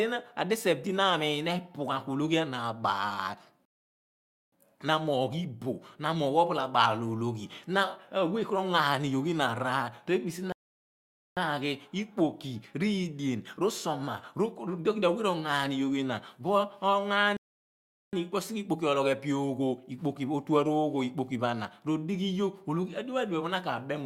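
The speech halts three times with rebuffering stalls: 3.65 to 4.52 s (about 0.87 s, resuming on "na amoogh"), 10.52 to 11.37 s (0.84 s) and 17.37 to 18.13 s (0.76 s). Each time, playback ran dry and waited for more data, then continued exactly where it stopped. The waveform and spectrogram show a flat, empty gap with no lost material.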